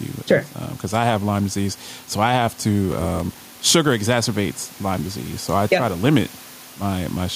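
Throughout the clip, the background swells in the pauses and ducks by around 5 dB under each loud syllable. This gain pumping likely comes from excessive input gain feeding a fast limiter, and it tracks the speech rather than drifting slowly like automatic level control. The room noise, about 28 dB below the speech, is what rises and falls.

From 2.88 to 3.75 s, right after "disease so I have", a steady buzz of about 47 Hz appears and the speech slows to 0.938 times normal speed while keeping its timbre. This block size mismatch (padded) fits a stage reading 1024-sample blocks that are only partly filled, with zeros making up the rest. Unlike a dropout, the gaps repeat regularly.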